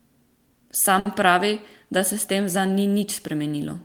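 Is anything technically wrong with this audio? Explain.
Yes, there is a short stall from a late packet between 0.99 and 1.20 s. A packet arrived late, the jitter buffer ran dry, and the receiver stretched the preceding sound for about 60 ms before resuming where it left off. Nothing is lost, but the sound hangs with a slight buzz or dip. A spectrogram shows frozen horizontal bands there.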